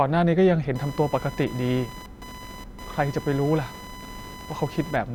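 Speech with computer activity noise from 0.75 s to the end: a chirping whine around 1 kHz, roughly 15 dB under the voice, that changes with the computer's activity, not with the speech or a steady mains hum.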